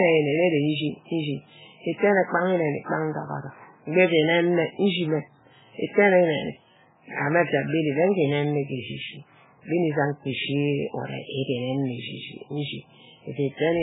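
Speech, with heavy MP3 compression damage running through the whole clip. Nothing is present above about 3.8 kHz, so sibilants and consonant detail are dulled. The remaining band has a watery, swirling texture as weak frequency components drop in and out between frames, and onsets are smeared. This level of damage fits a very low bitrate, around 8 kbps. The likely cause is an encoder starved of bits that discards the treble and thins out the spectrum.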